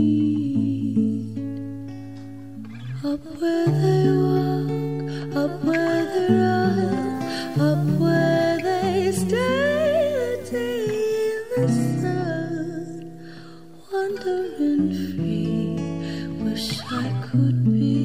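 Low bit depth with dither runs from 7.15 s to 10.60 s. In this stretch the audio is rounded to very few amplitude steps, which fits 8-bit quantisation. Dither noise added before the rounding turns the error into steady white noise rather than harsh distortion. It sounds like a constant, even hiss laid over the sound, sitting roughly 30 dB below the signal, that appears abruptly at 7.15 s and vanishes at 10.60 s.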